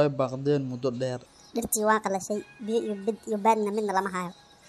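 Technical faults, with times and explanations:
1.26 to 4.69 s: section at the wrong speed. Speech runs 1.47 times too fast. Pitch rises about seven semitones, likely from a mismatched playback clock.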